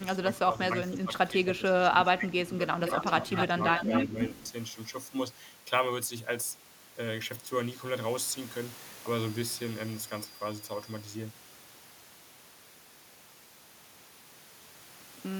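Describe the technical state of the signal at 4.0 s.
At 4.0 s the speech carries an echo leak, running from 2.84 s to 4.05 s. A delayed copy of the speech trails it by about 246 ms. The copy sits roughly 10 dB below. It is likely a far-end echo canceller letting loudspeaker sound back through.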